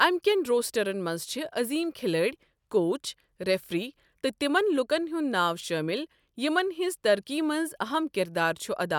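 Listening closely to the speech, nothing stood out as a technical problem at any point.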